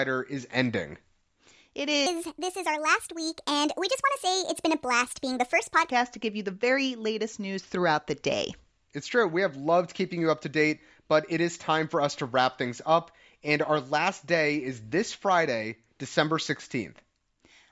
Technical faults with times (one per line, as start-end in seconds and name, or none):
2.06-5.90 wrong sample rate